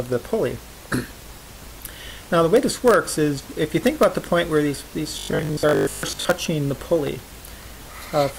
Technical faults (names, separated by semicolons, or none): robotic sound from repeated short buffers